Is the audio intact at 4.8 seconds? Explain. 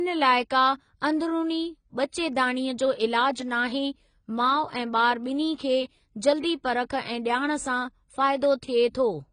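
No, 4.8 s sits in AAC compression damage running through the whole clip: nothing above 9.5 kHz, with dull, warbly sibilants. That likely points to AAC-LC at a low bitrate, around 24 kbps.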